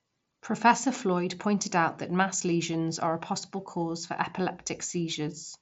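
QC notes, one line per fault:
The speech has passed through a Bluetooth mSBC headset codec, so nothing is present above about 7.7 kHz, with the faint graininess of light wideband headset coding at a rate that fits roughly 61 kbps.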